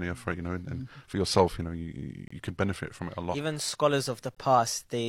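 Speech clip with two short, hard-edged dropouts that sound like a gap between stream segments. The first runs from 2.28 to 2.31 s and inserts about 26 ms of silence. The second is a shorter hole at 4.35 s, about 18 ms. They fall roughly 2 s apart, which fits 2-second segments whose timestamps don't quite meet. The player pads the mismatch with silence, so nothing's actually missing, just pushed later.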